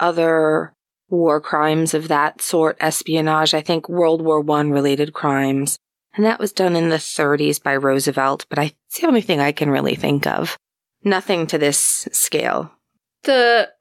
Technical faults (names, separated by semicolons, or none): none